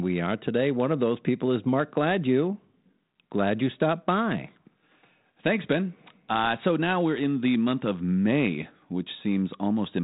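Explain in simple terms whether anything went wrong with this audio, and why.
Nothing went wrong with this speech recording. It passed through G.726 ADPCM, the telephone-style coding used by cordless phones, which leaves it sounding like a phone call with nothing above about 3.9 kHz and only a light trace of the coding itself.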